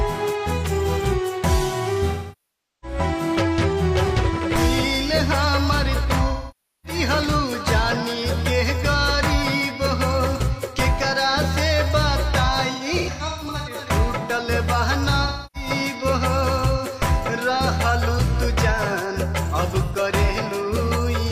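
AAC frame loss with concealment hits at 2.10–2.98 s, 6.28–6.99 s, 12.72–13.77 s (scattered short gaps, longest around 150 ms), 15.24–15.69 s and 19.85–19.96 s. The decoder rebuilds missing frames from the last good spectrum, so the shorter gaps sound smeared, noisy or phasey, with the longer ones thinning toward silence before recovering.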